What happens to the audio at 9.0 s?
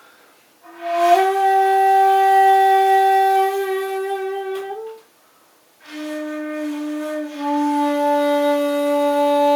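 Nothing goes wrong at 9.0 s; the audio plays through that moment intact, with no dropout, click or distortion.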